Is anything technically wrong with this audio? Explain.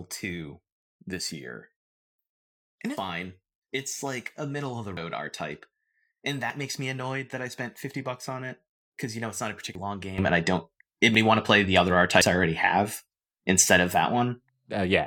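Yes, the speech has two kinds of fault: repeated skips from dropped buffers and an abrupt level change.

Dropped buffer (overrun) at 2.97, 4.97 (right after "a middle of the"), 6.50 (just before "makes me annoyed that"), 9.75 (after "know it's not a"), 11.15 and 12.21 s. Each time, the sound jumps straight ahead with no silence, as if a short piece had been cut out and the two sides spliced together. The likely cause is that the recording program fell behind and the hardware overwrote samples before they were collected. The missing stretches are roughly a tenth to a sixth of a second, with one nearer a twentieth of a second at 6.50 s.

Sudden gain jump at 10.18 s, holding to the end. The level rises by about 12 dB at once, with the voice and the background noise stepping up together. That points to a digital gain setting likely applied instantly rather than ramped in. Because the noise floor moves with the voice, the change does not sound like the talker getting louder. 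The skips at 11.15 and 12.21 s fall within this louder stretch.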